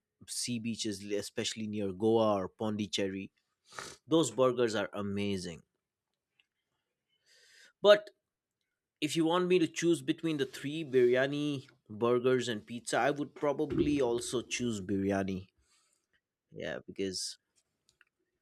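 Listening to the speech here, nothing technical stood out as wrong at any point.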